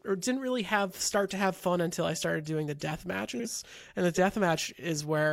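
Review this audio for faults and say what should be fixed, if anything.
Frames out of order from 3.34 to 3.46 s, right after "started doing the death": two neighbouring blocks of about 52 ms play swapped, giving a garbled flutter. Unlike a dropout, no time is lost. Reorder packets by sequence number before decoding.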